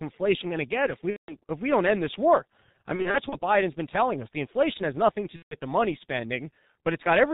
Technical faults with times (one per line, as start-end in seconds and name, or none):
0.00-7.34 G.723.1 codec
1.10-1.36 VoIP packet loss concealed by the speech codec
2.96-3.37 VoIP packet loss concealed by the speech codec
5.36-5.56 VoIP packet loss concealed by the speech codec